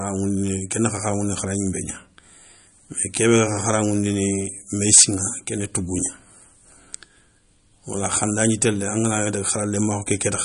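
From the start and through the whole recording, the speech carries plainly audible codec damage, most likely MP3 compression at a low bitrate, around 40 kbps. Nothing is present above 10.6 kHz, where the encoder has cut the treble outright. Below that, weak frequency components drop in and out between frames as the bit budget runs short, giving a watery, swirling texture, chirpy s sounds, and softened consonant attacks.

From 4.88 to 5.04 s there is hard clipping. For those 0.16 s the signal is driven about 14 dB beyond what a stage in the chain can pass, so the peaks are sliced flat. The squared-off tops generate harmonics far up the spectrum, and with overload this large the result is a harsh fuzz across every loud part of the sound rather than isolated crackles.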